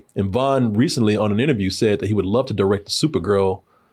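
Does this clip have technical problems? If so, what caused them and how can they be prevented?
No, there are no technical faults.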